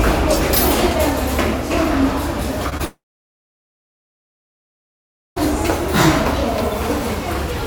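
Short concealed packet loss at 2.69 to 2.73 s and again at 2.77 to 2.81 s: each time about 20 ms of audio failed to reach the decoder in time, and the receiver covered the gap by extending the preceding sound, then blending back into the real signal. Both patches are heard as brief smears or wobbles, two closely spaced disturbances that make the sound stutter just before it cuts out.

Long network dropout from 2.85 to 5.38 s: the sound gives way to a short fading continuation, then roughly 2.4 s of silence, and resumes at 5.38 s with about 2.5 s of material simply gone. This is likely a stall in packet delivery, with the receiver briefly extending the last sound before running out of anything to play.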